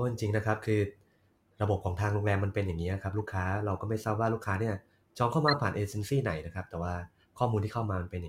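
Speech with two corrupt frames decoded: damaged compressed data played back as a faint glitch at 3.19 s and a louder glitch from 5.48 to 5.54 s, each spanning a couple of frames.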